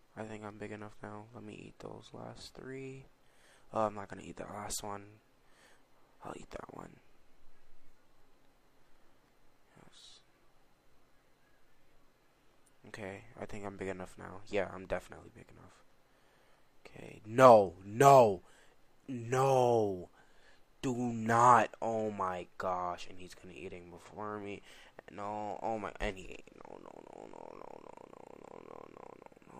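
No technical faults can be heard in this audio.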